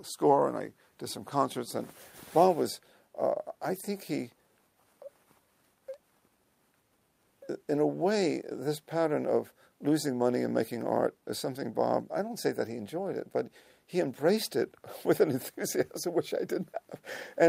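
No technical faults can be heard anywhere in the recording. The audio runs continuously from its opening moment to its close, with nothing audibly disturbing it.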